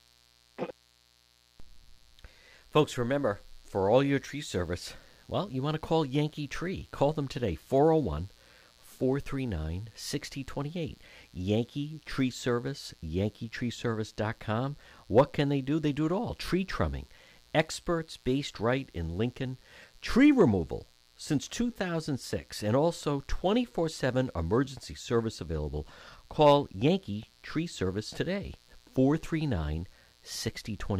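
From start to finish, a mains buzz sits about 35 dB under the speech. Switching spikes on 60 Hz power add harmonics reaching several kilohertz, so it sounds raspy and edged, unlike a smooth, purely low hum.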